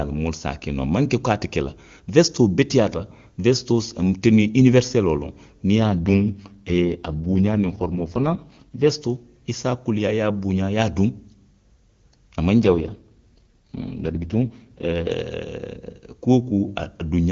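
Speech carried over an AMR-WB (HD Voice) link, where the normal passages sound clear and wideband, which suggests the 23.85 kbit/s top mode. Two AMR rate drops occur, from 5.76 to 8.90 s and from 12.62 to 15.13 s. In each, the voice turns rough and raspy while the bandwidth stays the same and there is no dropout. This fits the network switching the codec down to the 6.6 kbit/s mode to protect a weak radio link. Quality recovers when the rate steps back up.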